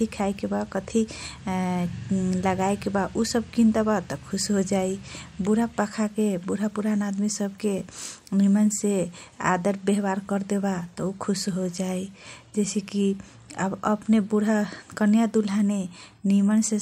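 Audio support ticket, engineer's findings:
Listened to the whole speech recording and found nothing to flag, so no fault to report on this one.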